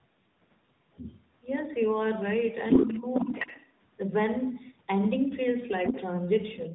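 Tandem speech coding runs through the whole clip. The speech has the rough, muffled and warbly quality of audio that has been decoded and re-encoded at link boundaries. Nothing is heard above 3.8 kHz, and the character fits a chain ending in AMR-NB at 10.2 kbit/s after passes through CVSD and G.711 A-law. Each stage encodes the previous stage's artefacts along with the speech, so the losses compound.

From 0.94 to 1.25 s a second voice is faintly audible, well below the talker. This is likely the other side's voice leaking through: the far end played on the loudspeaker and was not fully removed by the echo canceller. From 2.68 to 3.72 s the same leak becomes prominent, somewhat louder than the talker. It is heard again from 5.86 to 6.01 s at about equal level.

Inside the longer overlap, from 2.79 to 3.31 s, the talker's own level drops sharply, by roughly 15 dB at its deepest, across around 0.4 s in total. 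This is likely speech suppressed in double talk: with both sides active, the canceller could not separate the local talker from the echo and attenuated everything. A brief, shallow dip follows at 5.89 to 5.95 s. A moderate drop of around 10 dB runs from 6.54 s to the end of the clip.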